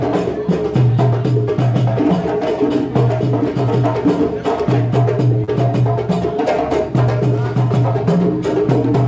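At 5.44 s to 5.50 s there is a short stall from a late packet: the jitter buffer ran dry and the receiver stretched the last sound for about 38 ms, then resumed where it left off, so nothing is lost but the playout runs about 38 ms later. It is heard as a brief held, faintly buzzy smear. On a spectrogram the frequency bands smear flat across that span, all below the 8 kHz ceiling that fits a wideband call codec such as G.722, and the waveform shows a few repeated, slightly dipped cycles.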